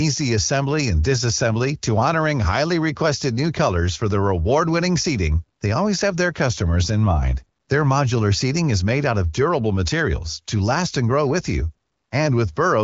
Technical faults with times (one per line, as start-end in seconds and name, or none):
none